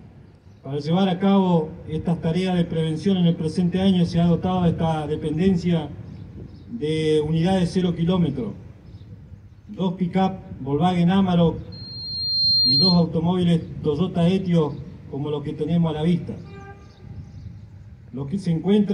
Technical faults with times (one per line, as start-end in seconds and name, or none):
11.72-13.06 loudspeaker feedback squeal